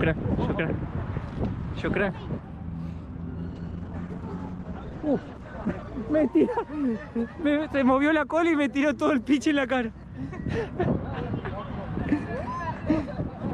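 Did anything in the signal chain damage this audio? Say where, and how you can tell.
Yes. From 3.48 s to 7.53 s the sound turns coarse and watery, and the top end thins out, with the worst stretch lasting about 2.2 s before clarity returns. This is a call bitrate drop at the codec stage. The call's bandwidth estimate fell, so the encoder was told to spend far fewer bits, going from 64 kbps down to 13 kbps. At that rate the coding gets rougher and the high frequencies are trimmed away until the bitrate climbs back.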